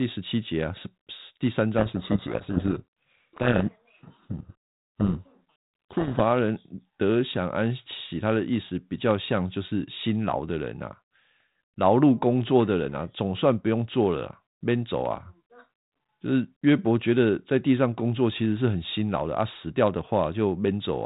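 From 1.78 s to 6.22 s the speech is buried under harsh, grinding distortion: a codec payload misread, where the G.726 code words arrive with their bit order reversed relative to what the decoder expects. Each 4-bit difference value is decoded wrongly and the adaptive predictor chases the errors. Unlike the light coding damage of the 32 kbit/s G.726 path, this distortion overwhelms the speech and switches on and off abruptly at those two times.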